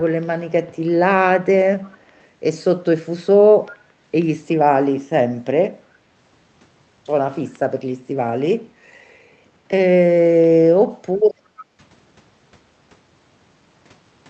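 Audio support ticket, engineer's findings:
Echo leak, 1.82–2.19 s and 11.57–11.64 s. Faint delayed copy of the speech trailing by 337 ms, roughly 35 dB under the speech first, about 25 dB under second. Likely a speakerphone endpoint's echo canceller leaving residual mic pickup uncancelled and returning it.

Background gated by the echo canceller, 11.39–11.79 s. Room tone dips up to about 7 dB, roughly 300 ms affected in total. Canceller clamps mic gain hard during loudspeaker playback, then releases. Coincides with the second echo leak.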